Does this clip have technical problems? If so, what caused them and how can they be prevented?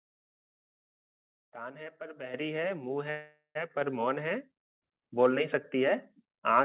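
Yes. The call software's automatic gain control raised the microphone volume in single steps: about 8 dB at 2.34 s, about 4 dB at 3.81 s and about 3 dB at 4.83 s. Each time, the sound and its background jump louder together. Turning off automatic input gain and setting a fixed microphone level would prevent these steps.

There is also a call audio freeze from 3.10 to 3.57 s, likely caused by delayed packets emptying the jitter buffer. The receiver stretched the last sound into a fading fill, including about 80 ms of silence, and then the audio resumed without losing anything, about 450 ms late. A more stable network connection or a deeper jitter buffer would prevent the freeze.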